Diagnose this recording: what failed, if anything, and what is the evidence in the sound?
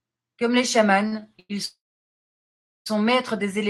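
Three short stalls from late packets hit the network and jitter-buffer stage of this speech call. Each time, a packet missed its slot and the buffer drained, so the receiver stretched the last sound until the packet arrived. The stalls fall at 1.07–1.14 s, where about 40 ms is held; at 1.20–1.23 s, about 20 ms; and at 1.39–1.51 s, about 100 ms. Each sounds like a syllable dragged out with a faint buzz or dip. Nothing is skipped, but the speech slips later in time at each stall.

A call audio freeze follows at 1.65–2.88 s, most likely caused by packets held up on the network. The jitter buffer emptied, and the receiver carried the last sound forward as a fading buzz or hiss, then went silent for about 1.1 s. Playback resumes exactly where it stopped, on "maîtres des éléments", so a gap of roughly 1.2 s is inserted and no speech is lost. The Opus call path itself holds audio up to about 12 kHz.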